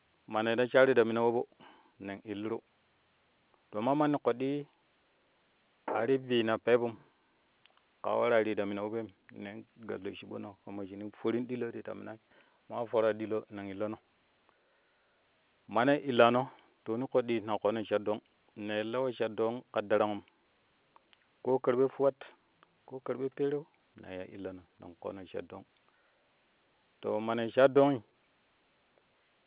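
No technical faults can be heard anywhere in the speech. The G.711 telephone coding shapes the sound as expected for an A-law line, with nothing above 4 kHz and a faint noise floor that rises and falls with the level.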